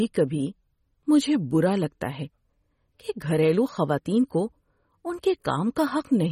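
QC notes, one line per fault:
Throughout: MP3 compression, plainly audible. The top end stops dead at about 15.9 kHz, and the sound has that watery, swirly edge with chirpy s sounds and smeared attacks, likely from a starved MP3 encoder dropping weak lines frame to frame, which fits roughly 32 kbps.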